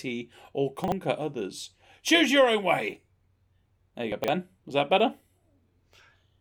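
Chunks out of order at 0.84 to 0.92 s and again at 4.12 to 4.28 s. In each, a 40 ms piece of speech is delivered late and plays after material meant to follow it. It trails by one chunk the first time and by three the second. Nothing is missing, but the reordering leaves hard joins, and the speech briefly jumbles. The second event is longer.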